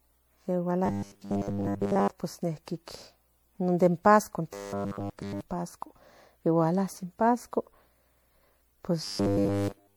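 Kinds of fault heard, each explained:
Generation loss: likely repeated MP3 re-encoding, about seven passes at 96 kbit/s, stacks up quantisation noise, leaving the speech swirly, hollow and smeared, with blurred attacks.
Robotic sound from repeated short buffers: new audio likely arrived too seldom, so chunks of about 10 ms were replayed, forcing a rigid, metallic 100 Hz buzz in three stretches.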